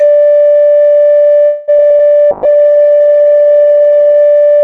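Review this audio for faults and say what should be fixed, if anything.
A call audio freeze from 1.45 to 1.70 s was likely caused by packets stalling in transit until the jitter buffer drained. The receiver stretched the last sound into a fading buzz for about 0.22 s. The music then resumes where it stopped, with nothing lost but about 224 ms of extra delay. To prevent this, a jitter buffer that adapts sooner to delay spikes, or a more stable network path, would keep the buffer from running dry.

Short concealed packet loss follows at 1.77 to 1.94 s, 1.88 to 1.92 s and 1.97 to 2.01 s. Each time, about 20 ms of audio missed the decoder. The receiver extrapolated the preceding sound for about 17 ms and crossfaded back, heard as brief smears or wobbles in the music, and the first event adds roughly 20 ms more delay. Forward error correction or redundant packets would let the receiver rebuild these short gaps instead of guessing.

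A call bitrate drop runs from 2.32 to 4.31 s. The bandwidth estimate collapsed, and the encoder fell from 96 to 14 kbps, staying at the minimum for about 1.9 s. The coarse coding makes the music rough and watery, and at that rate the top end is cut away, so it turns muffled. A less aggressive bandwidth estimator and a sensible bitrate floor for music would avoid such a deep cut.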